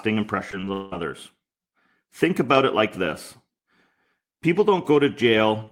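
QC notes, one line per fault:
0.51–0.93 s, repeated packet loss (robotic sound): the speech goes choppy here because audio keeps dropping out and getting patched by stretching the last bit heard. There are four holes in under half a second, with about 240 ms of fill covering more than half that stretch, so you hear pieces of the real speech missing. The longest hole lasts 185 ms.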